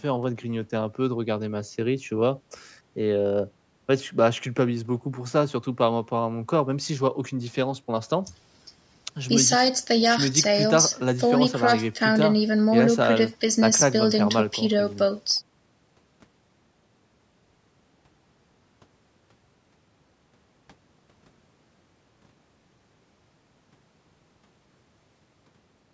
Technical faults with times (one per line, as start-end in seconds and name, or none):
none